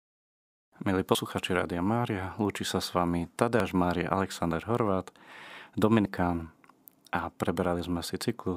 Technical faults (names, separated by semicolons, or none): audio missing between chunks